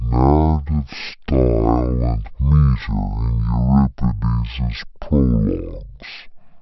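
Wrong sample rate, throughout: the speech plays at half speed and a full octave, 12 semitones, lower, because the samples are clocked out at half the rate they were captured at with no conversion, which fits 48 kHz audio played at 24 kHz. Voices sound slow and deep.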